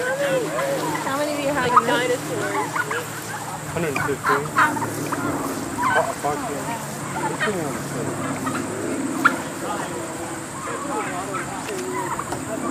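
No technical faults are audible anywhere in the clip.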